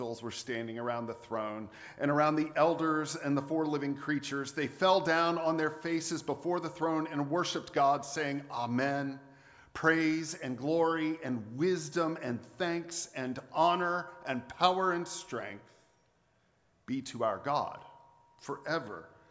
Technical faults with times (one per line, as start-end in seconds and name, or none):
none